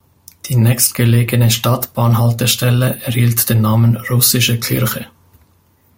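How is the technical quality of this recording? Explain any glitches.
Nothing technical goes wrong anywhere in this recording, so there are no glitches to explain.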